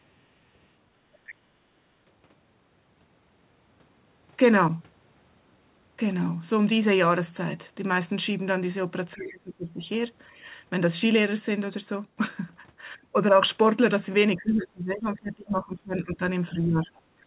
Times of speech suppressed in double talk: 9.14-9.80, 14.36-16.21, 16.49-16.90

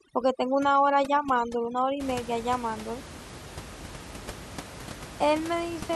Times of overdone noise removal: 0.00-2.00

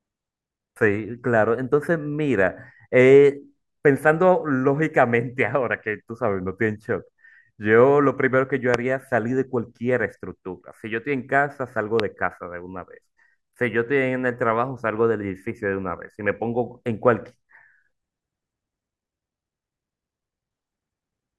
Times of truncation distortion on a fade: none

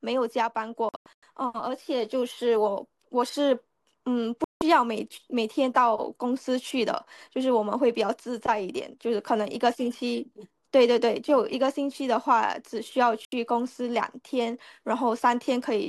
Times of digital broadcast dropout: 0.89-1.23, 4.44-4.62, 13.25-13.33

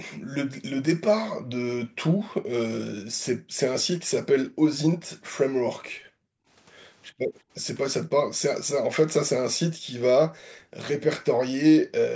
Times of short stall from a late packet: none

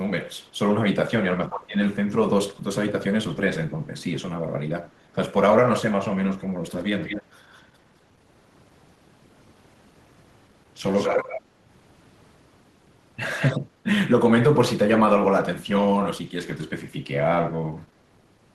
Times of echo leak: 7.00-7.24, 13.38-13.60

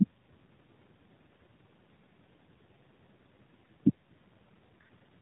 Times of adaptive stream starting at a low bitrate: none

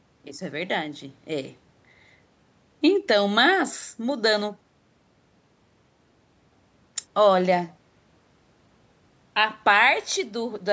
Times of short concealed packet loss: none

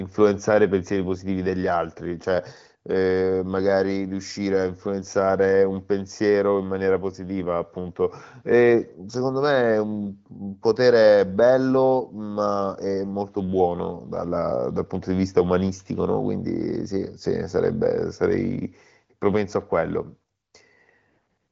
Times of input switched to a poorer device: none

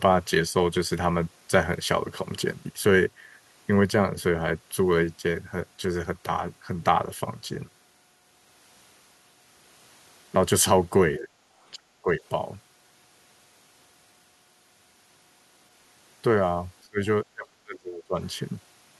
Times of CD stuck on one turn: none

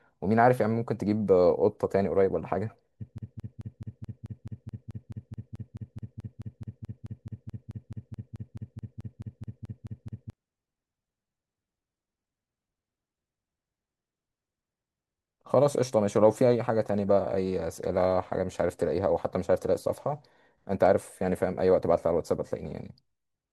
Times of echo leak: none

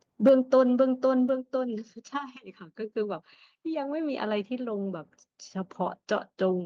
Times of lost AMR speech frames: none

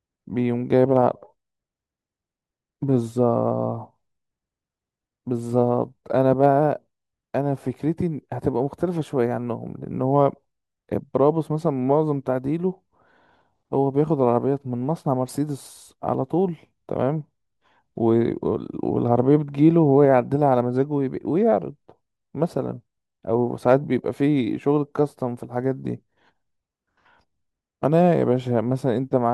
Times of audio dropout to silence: none

